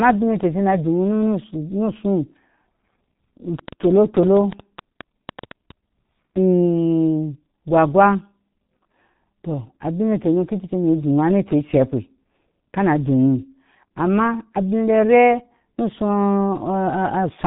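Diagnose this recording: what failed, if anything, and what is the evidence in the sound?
The speech passed through the G.723.1 codec at about 6.3 kbit/s. Its 30 ms frames and 4 kHz ceiling leave the whole recording muffled and hoarse, with smeared consonants.

From 3.59 to 5.72 s, a train of clicks, likely interference or a struggling interface, injects about fifteen irregular pops, roughly 7.6 per second, some well above the speech level.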